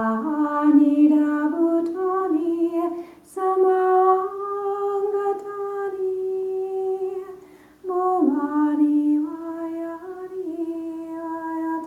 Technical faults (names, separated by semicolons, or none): none